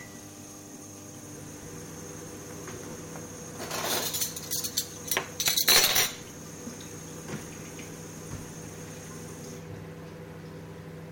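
From 1.35 s to the end at 11.12 s, a screen or video cable is coupling its signal into the audio path, causing video or display buzz. It sounds like a steady 75 Hz buzz at the picture's field rate, topped by gritty hash, sitting roughly 20 dB below the sound.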